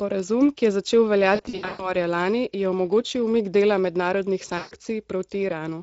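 Speech coded with the Speex codec throughout, and the damage is plainly audible: the voice sounds hoarse and noisy, which fits a middle quality setting near 16.8 kbps. On a spectrogram the band above 4 kHz shows as smeared, noise-like fill instead of clear harmonics and consonant detail. VoIP packet loss concealed by the speech codec breaks the sound twice. From 1.35 to 1.93 s, after "ki je začel" and before "lani je", about 320 ms goes missing in gaps spread over 440 ms, the longest lasting 120 ms. The voice is stretched out from the last sound and fades. From 4.57 to 4.75 s, after "umik dela mednarodnih", 140 ms goes missing and is covered the same way. In the waveform these stretches shrink in level. On the spectrogram they show as frozen bands that fade out.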